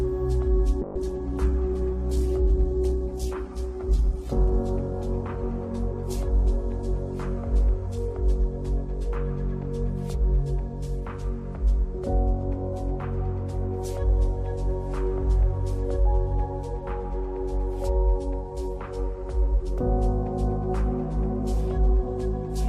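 A call bitrate drop runs from 0.82 s to 7.11 s. The encoder was forced to spend far fewer bits, and the sound turns coarse, watery and muffled, bottoming out for about 3.47 s before clarity returns. This fits a fall from 96 to 12 kbps.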